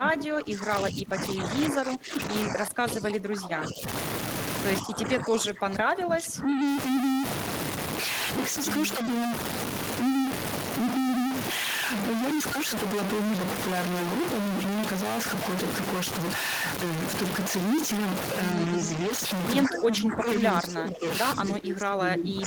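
A distortion rides on the speech from start to finish, and the pauses never fall fully quiet but stay filled with a gritty noise floor. That points to a stuck bit: one bit of each sample is likely held at a fixed value by a broken data line or converter, so roughly half the samples land off by that bit's weight, and quiet passages flicker with noise as small values swing across zero.

Over the same span, the speech sinks and thins in four stretches: 0 to 3.87 s, 4.81 to 6.63 s, 19.64 to 21.06 s, and 21.35 s to the end. The first two dip by around 20 dB at their deepest and the last two by around 15 dB, with the sound dulling or breaking into pieces rather than fading smoothly. This is speech suppressed in double talk. While both ends were talking, the echo canceller likely could not tell this talker from the returning loudspeaker echo, and turned everything down together.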